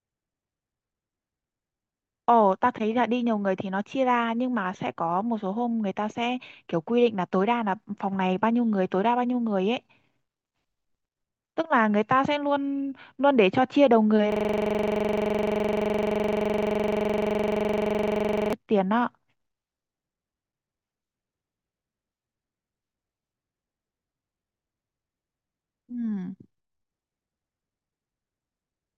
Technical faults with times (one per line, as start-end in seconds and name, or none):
14.32-18.53 system hang loop